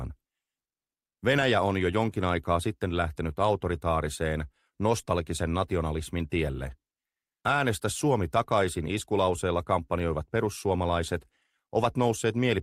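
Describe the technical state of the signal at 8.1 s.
At 8.1 s the signal is intact, with no audible fault at that point.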